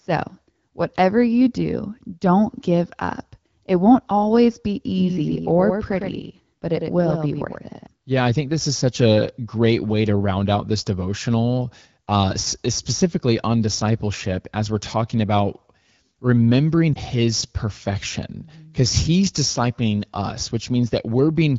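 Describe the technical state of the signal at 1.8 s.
At 1.8 s the speech is intact, with no dropout, distortion or other fault, and it carries the band-limited clarity expected of wideband HD Voice coding at a rate around 12.65 kbit/s.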